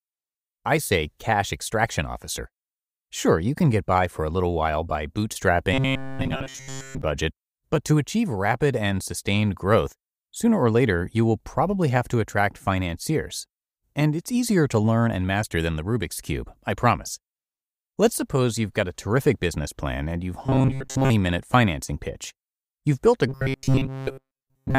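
Speech with robotic sound from repeated short buffers at 5.74–7.02 s (before "budget but to achieve"), 20.46–21.11 s (after "business plan and you've") and 23.29–24.78 s (after "built a"). A rigid 134 Hz metallic buzz is imposed on the voice. Repetition takes over completely in the first and last spans and through most of the middle one. The likely cause is a chunk of about 7.5 ms being replayed while new audio is skipped. Unlike dropouts, the sound never goes silent, and the buzz keeps one fixed pitch.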